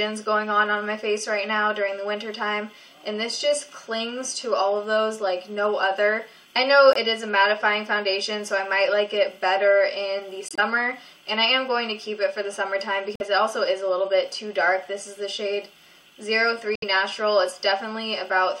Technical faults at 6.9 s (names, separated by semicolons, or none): corrupt frame muted